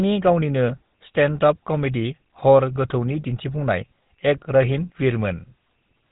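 From start to finish the speech carries GSM full-rate codec damage, plainly audible throughout. The codec rebuilds the voice from a vocal-tract model fed by a sparse, regularly spaced pulse excitation, which fits the 13 kbps full-rate mode, so voicing turns buzzy and gravelly, and nothing survives above 4 kHz. That steady roughness, rather than the warbling, swirly artefacts of a low-bitrate transform codec, is what marks it as GSM.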